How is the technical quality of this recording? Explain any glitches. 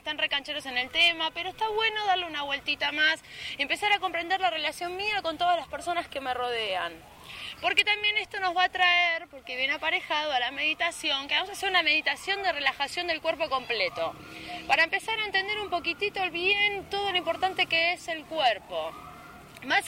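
No glitches or technical faults are audible anywhere in the recording, so there is nothing to explain.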